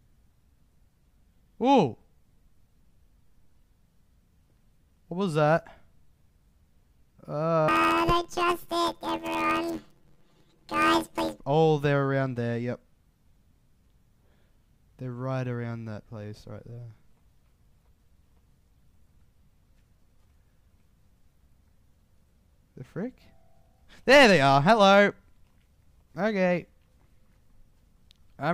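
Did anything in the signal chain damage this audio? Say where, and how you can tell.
Yes. From 7.68 s to 11.40 s the sound turns into a robotic buzz at about 86 Hz with no clear octave shift, then returns to normal. This is planar audio read as interleaved, a fault in the sample-format conversion stage. Each block of about 11.6 ms, which fits a 512-sample buffer, stores all left samples and then all right samples. The reader treats them as alternating pairs, so each block plays twice at double speed. Blocks this short give a buzz at the block rate rather than an octave jump.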